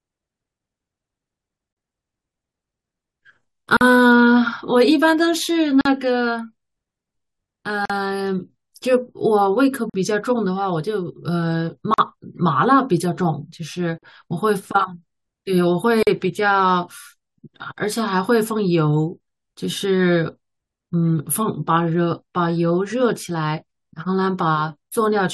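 Speech with a gap at a join of encoded pieces every 2 s, at 1.73, 3.77, 5.81, 7.85, 9.90, 11.94, 13.98 and 16.03 s. Each silence lasts 38 to 43 ms, where separately encoded chunks kept their start delay and end padding. A spectrogram shows narrow, slightly smeared vertical blank stripes, and the waveform shows short flat dropouts.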